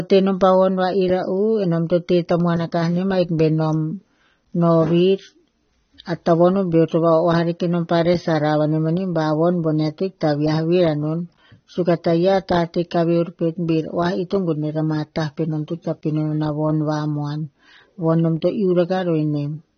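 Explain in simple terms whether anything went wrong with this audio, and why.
The speech sounds dull, muffled and warbly from start to finish, with nothing above 6.3 kHz. The likely cause is heavy AAC compression squeezing the sound.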